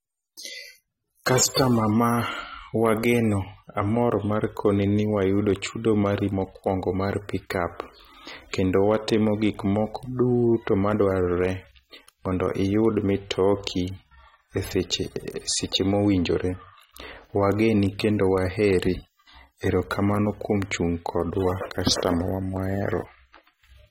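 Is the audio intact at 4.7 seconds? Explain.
No, AAC compression runs throughout, including 4.7 s: likely a low-bitrate AAC-LC encode, about 32 kbps, with nothing above 16.6 kHz, leaving the speech dull, smeared and fizzy on sibilants.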